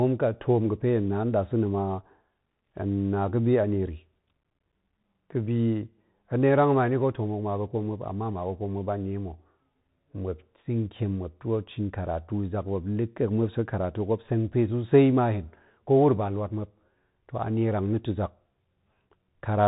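From start to finish the speech carries Bluetooth CVSD headset codec damage, plainly audible. The encoder sends a single up-or-down bit per sample with an adapting step, consistent with a 64 kbps headset link, so sharp, loud high sounds outrun the step and smear, s sounds turn scratchy, and a granular hiss sits beneath everything. On a spectrogram, energy stops dead at about 3.8 kHz, with a grainy noise floor below it; the waveform looks slightly stair-stepped on fast transients.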